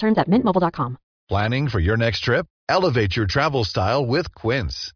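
No technical faults can be heard anywhere in this recording.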